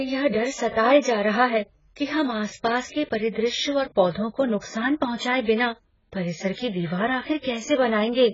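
AAC compression runs through the whole speech clip: nothing reaches above 7.5 kHz, and the heavy damage leaves a dull, smeared sound with a warbling, fizzy edge on sibilants. This is likely AAC-LC at a very low bitrate, around 12 kbps, quantising coarsely and trimming the top band.

Pre-echo appears at 4.61 s: a short hiss of about 17 ms arrives just ahead of a sharp onset. The codec spread quantisation noise across its whole block, so noise sized for the attack leaked into the quiet moment before it, softening the onset.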